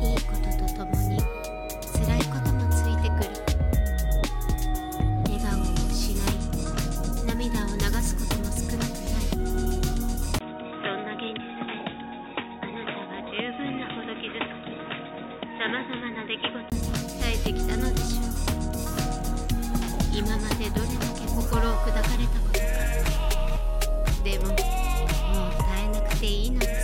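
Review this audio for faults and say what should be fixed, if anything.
From 10.39 to 16.72 s the sound turns dull and boxy, with nothing above 3.8 kHz, drops roughly 10 dB and gains a faint new noise floor after a 20 ms gap. This is likely an input switched to a poorer device. Unlike a filter or EQ change, bandwidth, level and noise all shift together. Lock the recording input so the system cannot hand over to another microphone or headset mid-session.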